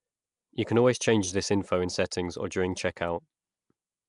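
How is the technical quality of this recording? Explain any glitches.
The technical quality is noticeably compromised throughout the speech. There is a rough, hissy halo around the voice, a smeared, underwater character, and no content above about 10.6 kHz. This plainly audible damage is likely Nellymoser compression, Flash's old microphone codec, at a rate that fits roughly 44 kbps. It codes short blocks with a fixed, small bit budget, so weaker bands receive no bits and are filled in with noise.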